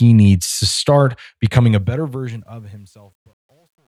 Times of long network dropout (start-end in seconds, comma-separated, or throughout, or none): none